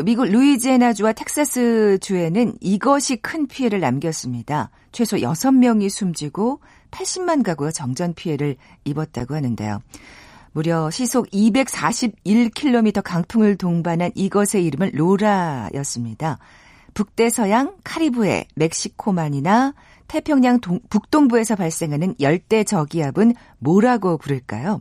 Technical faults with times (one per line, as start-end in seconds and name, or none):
9.20 block of digital silence